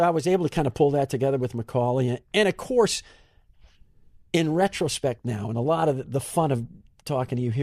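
No technical faults are audible.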